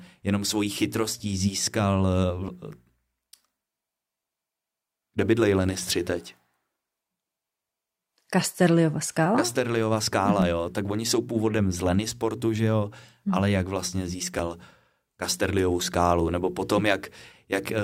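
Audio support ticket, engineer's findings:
Small skips in the speech at 8.44, 10.42, 12.40 and 14.39 s, every 2 s. Overlap between stream segments: the player trims overlapping timestamps, dropping 6–15 ms of real audio.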